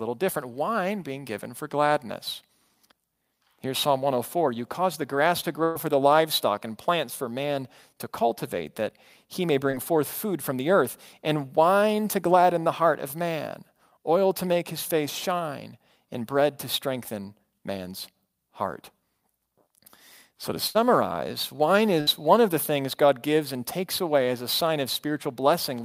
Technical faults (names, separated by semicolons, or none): burst of packet loss; short concealed packet loss